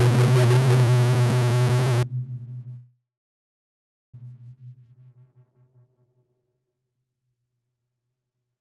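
From 0 to 2.03 s, a stuck bit, likely a converter or data line held at one value, throws about half the samples off, with noise filling the pauses.

From 2.76 to 4.15 s, a call audio freeze, likely from delayed packets emptying the jitter buffer, inserts a 1.37 s gap. A short fading buzz or hiss gives way to 1.1 s of silence, then the sound resumes where it stopped with nothing missing.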